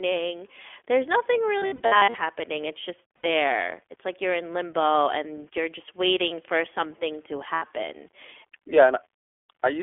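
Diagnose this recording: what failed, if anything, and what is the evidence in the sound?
The codec stage is the first failure: the speech was carried by the iLBC codec, a narrowband VoIP coder. Nothing survives outside roughly 300 Hz to 3.4 kHz, and the voice has a plainly audible rough, synthetic edge. That fits the 15.2 kbps mode with 20 ms frames, each coded on its own.

The second failure is in the network: packets went missing, and the listener hears lost iLBC frames. From 1.58 to 2.19 s, gaps totalling 360 ms are scattered over 600 ms, in runs of up to about 70 ms. Shorter losses follow at 3.18 to 3.27 s (60 ms) and at 7.54 to 7.64 s (80 ms), just after "waiting for something to". In each gap the decoder fills in by repeating the last pitch cycle mixed with noise, so the sound becomes a held, faintly buzzy vowel. Clean speech returns immediately afterwards because no frame depends on the one before it.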